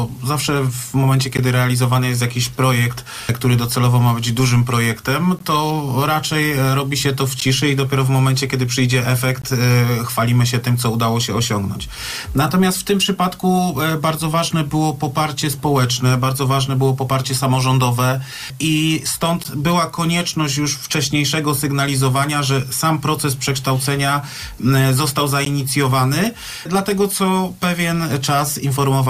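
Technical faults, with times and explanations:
1.37, 5.39, 7.40, 9.42, 19.44 and 25.45 s, gap between stream segments: short hard-edged dropouts to silence, about 12 to 19 ms each, all landing on 2-second segment boundaries. The segment timestamps don't quite meet, so the player pads the hole with silence. No audio is actually lost.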